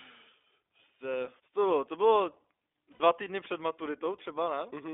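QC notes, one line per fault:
throughout: iLBC codec. The audio is confined to about 300 Hz to 3.6 kHz, and the speech has a plainly audible rough, synthetic edge, which fits 15.2 kbps with 20 ms frames. That coded graininess separates it from a plain telephone band-limit, which only dulls the sound.
0.41 s and 2.92–3.01 s: lost iLBC frames. About 40 ms and 80 ms are filled by the repeated last pitch cycle mixed with noise, heard as a held buzzy or breathy vowel. There is no silent gap, and because each frame decodes independently, clean speech returns almost immediately.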